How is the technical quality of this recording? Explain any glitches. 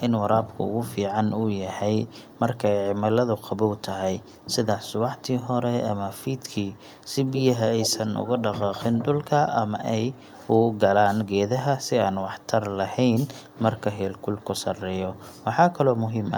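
The speech is marred by echo leak in four places. At 2.02–2.39 s and 12.4–12.47 s a faint copy lags about 200 ms behind. At 7.28–7.42 s and 7.8–8.58 s a much stronger copy trails by 169 ms. The likely cause is an echo canceller at the far end letting its loudspeaker playback through. Unlike room reverberation, this is a distinct, delayed repeat rather than a smooth decaying tail.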